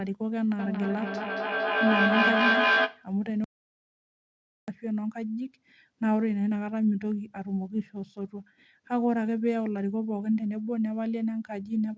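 From 0.59 to 3.11 s a feedback howl builds: a loop between a microphone and a loudspeaker in the same room keeps regaining level, so it swells to a tone near 1.5 kHz, peaking about 4 dB above the speech and pulsing roughly every fifth of a second. Unlike ordinary echo, the repeats grow rather than fade.

From 3.44 to 4.68 s the audio drops out to silence for about 1.24 s, likely because the input was lost while the recording kept writing silence. The gap is silent with no room tone at all.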